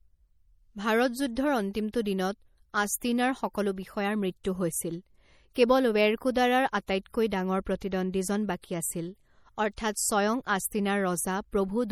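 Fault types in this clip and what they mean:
MP3 compression: watery, swirling artefacts throughout the speech, likely low-bitrate MP3 near 48 kbps; unlike plain filtering, weak detail flickers and s sounds chirp.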